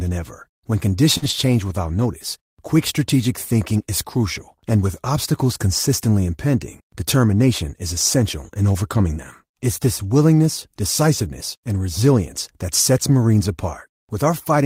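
Right at 1.17 s there's a short concealed packet loss: about 40 ms never arrived, so the decoder stretched the previous sound across the hole, giving a quick smear. Overlapping it from 1.22 to 1.32 s, a lost packet rebuilt from error correction shows up. Three lost packets were replayed from low-bitrate backup copies, so about 60 ms comes through rougher and noisier with no actual gap.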